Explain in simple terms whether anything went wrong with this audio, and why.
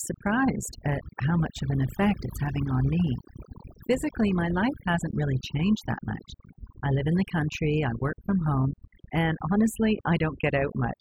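Overdone noise removal runs through the whole clip: the background drops and breaks up into twinkling specks, unlike plain hiss or muffling.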